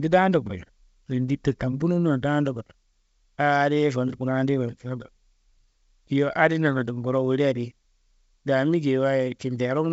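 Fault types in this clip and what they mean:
No faults found in this clip.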